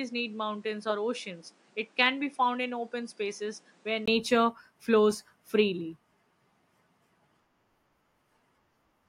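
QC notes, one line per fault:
0.00–4.08 s, input switched to a poorer device: sound is duller, with nothing above 10.7 kHz, about 5 dB quieter with a faint extra noise floor, then a 20 ms gap at 4.08 s where fuller sound returns; likely a different microphone in use.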